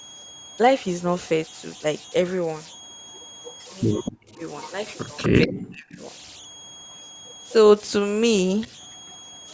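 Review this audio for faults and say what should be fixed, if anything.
Converter idle tones run through the whole clip: a thin whistle near 3 kHz sits about 19 dB below the speech, from an undithered delta-sigma converter locking into repeating bit patterns at low input. On a spectrogram it shows as a steady horizontal line. Adding dither at the converter prevents this.

Echo leak, at 0 to 0.57 s, 1.25 to 5.28 s, 6.34 to 7.53 s and 8.61 to 9.46 s, is a quiet delayed copy of the speech trailing by 245 ms. It is faint at the edges and clearest between 1.25 and 5.28 s, likely from a far-end echo canceller passing loudspeaker pickup. A spectrogram shows harmonics repeated 245 ms later. Better far-end echo cancellation would stop it.

Speech suppressed in double talk appears at 4.14 to 4.41 s and 5.28 to 6.01 s, where the speech sinks deeply or drops out, likely because the echo canceller ducked everything while both sides spoke. 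The waveform envelope collapses there, and the spectrogram goes dark across bands. A double-talk-aware canceller would prevent this.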